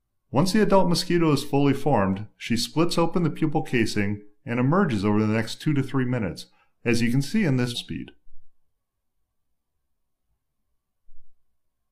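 The audio jumps abruptly forward between 7.71 and 7.77 s, with a brief blip at the join where the programme resumes further ahead. This is a stream segment skipped: one segment of the stream likely failed to load, and playback continued from the next.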